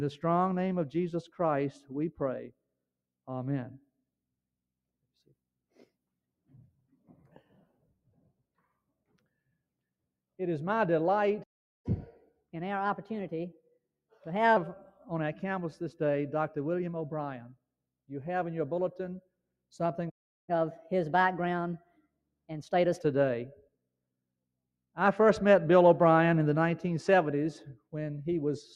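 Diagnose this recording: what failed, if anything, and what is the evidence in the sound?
Sound cut by the noise suppressor at 1.74–1.91 s, 6.47–8.41 s, 8.88–9.54 s, 21.79–22.5 s and 23.55–23.88 s, in the call-processing stage. The suppressor classified wanted sound as noise and attenuated it, so the level sinks by about 15 to 22 dB in those spans.

Playback stall at 11.43–11.86 s and 20.09–20.49 s, in the playback buffer. Output drops to silence for roughly 0.41 s and 0.38 s, then resumes. The likely cause is the player running dry of data or its audio thread being blocked, leaving nothing to send out.

Catch-up at higher speed follows each stall, at 11.86–14.57 s and 20.49–23.02 s, also in playback. The player resamples its backlog at 1.15× speed to recover lost time, raising pitch by roughly two semitones, then returns to normal rate and pitch.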